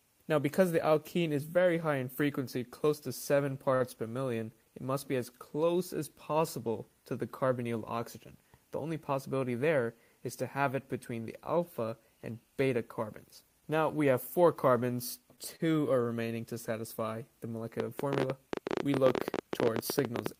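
At 3.75 s a short stall from a late packet holds the sound for about 54 ms: a packet arrived late, the jitter buffer emptied, and the receiver stretched the last sound until the data came, then resumed exactly where it left off. The same happens at 15.36 s, about 17 ms, and at 15.56 s, about 37 ms. Nothing is skipped. A sustained, slightly buzzy hang is heard rather than the gap or abrupt jump of actual packet loss.

From 17.8 s to the end a train of clicks runs over the audio at roughly 15 per second, with uneven spacing and peaks of about 20 dB above the sound. The likely cause is interference from nearby equipment or a faulty connection or power supply. Because the clicks stand out above the audio and continue through pauses, they are separate pulses added on top of the sound, not damage to it. Their uneven ticking sets them apart from a buffer glitch that recurs at a fixed interval.

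Inside that stretch, from 18.05 s to 18.53 s, a jitter buffer speed-up plays the audio at 112% speed. The buffer had built up extra delay, so the receiver cut many pitch-period-length slices, about 70 ms in all, to catch up. Pitch stays the same while the pace sounds hurried, which is what separates it from a faster playback clock.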